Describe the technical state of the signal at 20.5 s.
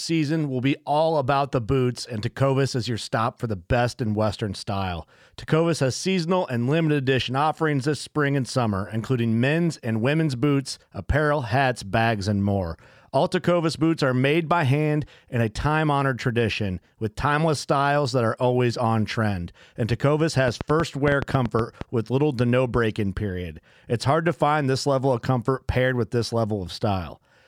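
At 20.5 s a train of clicks begins and runs to 21.82 s, just before "with little to no". Roughly ten short pulses of much the same shape arrive at about 8.3 per second, spaced unevenly. They stand out sharply, peaking around 15 dB above the speech. They sound like an uneven ticking laid over the voice. The likely cause is interference from nearby equipment or a faulty connection or power supply injecting repeated pulses into the signal.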